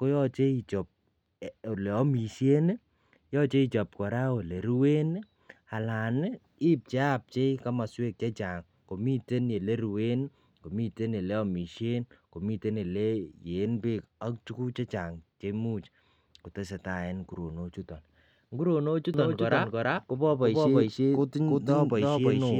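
At 19.14 s, right after "en nguronok chuton nguronok", a doubled audio track begins and runs to the end. A full-band copy about as loud as the original trails it by roughly 300 ms, likely from a second, slower capture path. It sounds like a dry, sudden echo, and on a spectrogram every feature repeats with a fixed offset.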